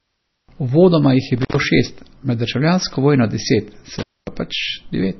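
Heavy data reduction, likely MP3 compression at a low bitrate near 24 kbps, removes everything above 6 kHz and leaves the speech dull, watery and swirling throughout. An intermittent contact opens twice: from 1.38 to 1.58 s, between "jih je" and "šest med državljansko vojno", and from 3.99 to 4.28 s, after "med državljansko vojno deset". Each time the sound drops out with crackle at the edges, for about 126 ms and then about 245 ms.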